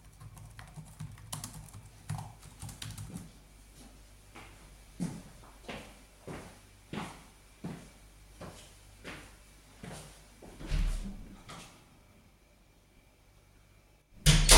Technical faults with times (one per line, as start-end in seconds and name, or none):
none